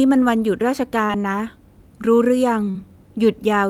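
Short concealed packet loss at 1.05–1.13 s and 2.70–2.76 s: about 40 ms of speech went missing each time, and the decoder extrapolated the preceding sound across the gap, leaving a brief smear.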